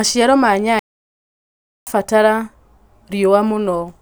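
At 0.79 s the speech cuts off abruptly into silence, and nothing is heard until 1.87 s, a gap of about 1.08 s before the sound continues. This is a playback stall, likely caused by the player running short of data or its output thread being blocked.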